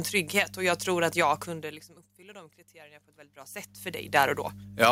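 Mains hum runs through the whole recording as a steady low tone at 50 Hz, sitting roughly 15 dB below the speech. A ground loop or a nearby transformer is letting the power line leak into the signal path, so the hum never changes.

Automatic gain rising occurs from 2.17 to 4.46 s, just after "att jag kunde liksom". The input had dropped by about 23 dB as the talker moved, and the gain control responded by raising its gain over about two seconds. Voice and background swell together, but only about 4 dB of the lost level comes back.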